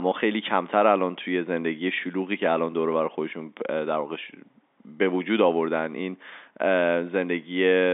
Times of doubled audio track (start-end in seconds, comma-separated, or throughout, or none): none